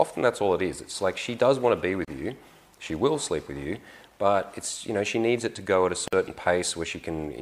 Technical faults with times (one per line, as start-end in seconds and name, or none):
2.05-2.08 gap at a join of encoded pieces
6.08-6.13 gap at a join of encoded pieces